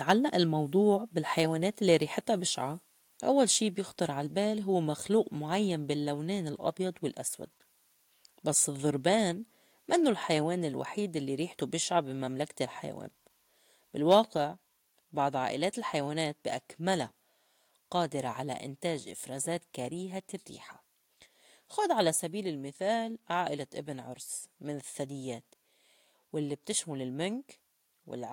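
Speech throughout has a grainy, signal-following grit on quieter passages, with noise around 40 dB below the signal, likely low bit depth without dither, consistent with truncation to about 10 bits. Harsh crackling edges on peaks at 0.09–0.11 s and 14.11–14.15 s point to likely microphone overload, with tops clipped about 3 dB and about 1 dB over the converter's limit. Sudden level drops of about 2, 1, 3 and 1 dB at 1.02, 9.99, 14.37 and 22.17 s are likely the microphone volume stepped down by the call software, the 14.37 s drop following the overload just before it.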